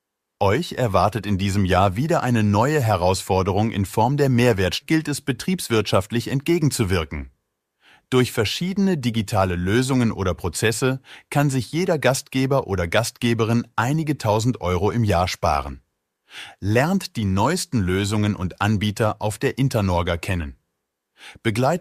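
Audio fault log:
4.81–4.86 s, stream segment skipped: the speech jumps abruptly ahead with a brief blip, landing on "es betriebswirtschaftlich entgegenzuwirken" with a stretch of the talk missing. This is likely one segment of the stream failing to load, so playback resumed from the next segment.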